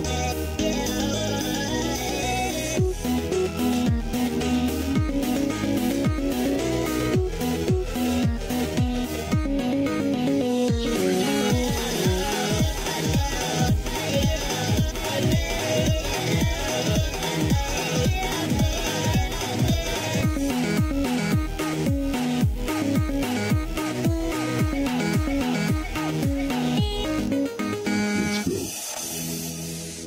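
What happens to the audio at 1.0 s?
Nothing goes wrong at 1.0 s; the audio plays through that moment intact, with no dropout, click or distortion.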